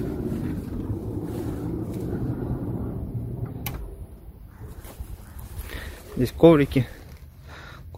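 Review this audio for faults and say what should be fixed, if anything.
Nothing needs fixing, since no technical fault can be heard anywhere in the signal.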